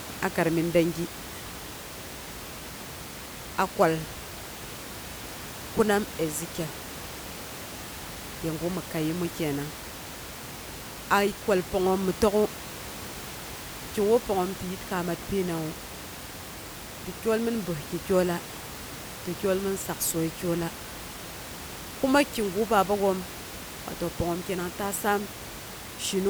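Nothing goes wrong technically anywhere in this speech recording, and the only extra sound is the room's own background noise, which stays about 13 dB below the speech.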